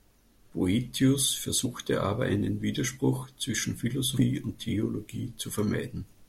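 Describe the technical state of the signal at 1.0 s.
At 1.0 s the speech signal is intact, with no audible dropout, distortion, glitch or other technical fault at that moment.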